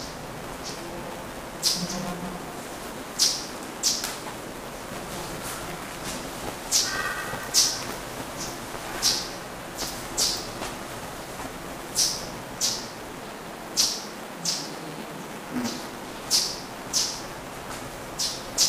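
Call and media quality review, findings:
Buffer tearing, throughout: steady 345 Hz robotic buzz on everyday sound, fits a 128-sample buffer. Playback ring-buffer pointers crossing; a third of each period replays audio about 10 ms old. Spectrogram: harmonic comb; waveform: hard splices.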